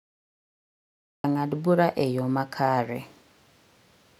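A speech clip with two faults. The first is a cut-off start: the first 1.24 s are digital silence, and the speech enters abruptly at 1.24 s, mid-sound and with no natural attack, just before "ng'ad bura e yo". This is the signature of recording or streaming that began late. The second is pre-emphasis left on, from 2.96 s to the end. The treble is lifted by about 8 dB at 10 kHz relative to 1 kHz, following the CD 50/15 µs curve, because the matching de-emphasis was never applied. That section sounds thin, bright and sibilant.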